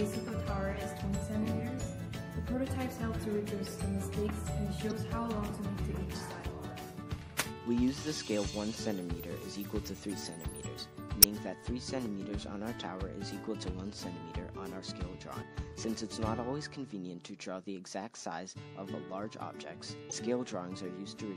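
The whole sound has a watery, swirly quality with dulled treble and smeared attacks, likely MP3 compression at a low bitrate, something like 64 kbps. There's also damaged data in the compressed stream: short chirps or blips at 4.87 to 4.92 s, 11.20 to 11.25 s, 15.41 s and 20.09 to 20.13 s, where the decoder lost sync and jumped ahead to the next frame.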